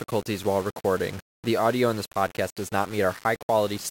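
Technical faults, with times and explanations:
Throughout, low bit depth without dither: the speech carries a coarse, grainy distortion sitting roughly 20 dB below the signal, and it rises and falls with the voice rather than forming a steady hiss. Quiet tails turn gritty. That points to a signal likely rounded to about 5 bits with no dither. Dithered reduction would leave a constant, even noise floor, and this error instead stays tied to the sound itself.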